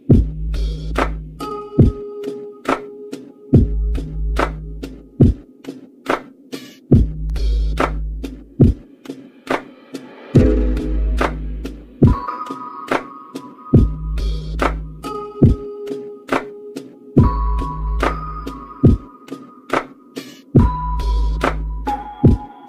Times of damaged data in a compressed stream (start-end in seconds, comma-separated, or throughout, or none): none